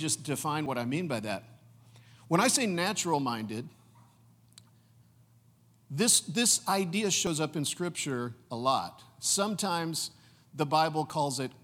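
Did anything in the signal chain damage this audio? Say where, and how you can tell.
Yes. A likely dropped buffer (overrun) at the driver stage discarded samples, splicing the speech with a small skip at 0.66, 7.27 and 11.1 s.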